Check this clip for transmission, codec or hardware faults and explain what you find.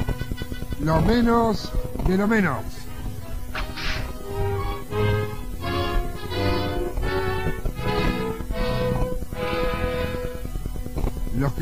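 No faults can be heard anywhere in the clip. Nothing at any point in the audio stands out as needing a closer look.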